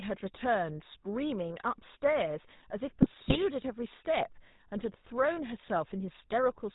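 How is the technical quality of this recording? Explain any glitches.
The technical quality is fairly rough. The whole clip has gone through a low-rate phone codec, and there's one short patch where the decoding breaks up.

The GSM full-rate codec damage runs the entire length. The sound fits the old 13 kbps GSM full-rate codec. It models the vocal tract as a filter and drives it with a coarse, regularly spaced pulse excitation, throwing away most of the fine detail. Nothing survives above 4 kHz, so the speech is dull and band-limited, with a clearly audible buzzy, gravelly roughness laid over every sound.

From 3.02 to 3.38 s you get GSM bit errors. Over those roughly 0.36 s, corrupted bits reach the decoder, which fits an error rate of around 3 percent hitting a run of about fifteen 20 ms frames. When the filter, pitch or gain parameters get scrambled, the decoder rebuilds each frame with a warped spectrum or a wrong level. 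The speech collapses briefly into squawky, gargling, popping noise before it settles back.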